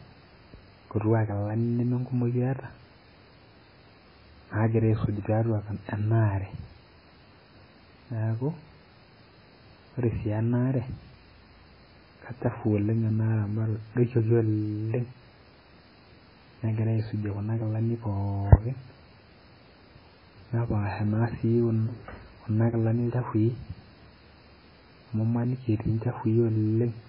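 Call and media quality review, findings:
Speech dull, watery throughout; hard cut, nothing above 5.3 kHz. Likely MP3 compression, heavily starved, fits a 16 kbps bitrate: encoder drops treble, zeroes weak lines that flicker frame to frame. Swirly chirps on s sounds, unlike a clean low-pass.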